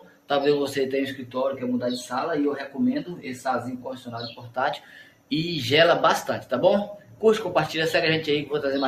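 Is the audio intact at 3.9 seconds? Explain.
No. From 3.78 to 4.09 s the sound is cut by the noise suppressor. It judges this steady or fading material to be noise and pulls it down by about 10 dB, so the level sags or the tail is clipped short. On a waveform the envelope dips suddenly, and on a spectrogram the energy thins to a faint band for roughly a fifth of a second.

This moment sits inside a wider fault: a noise suppressor applied to music or sounds is active across the whole clip. Because it treats held tones and ambience as noise, gain swings by around 10 dB and the sound pumps, flutters or thins out. A waveform shows an uneven, breathing envelope, and a spectrogram shows decays and sustained partials fading unnaturally early.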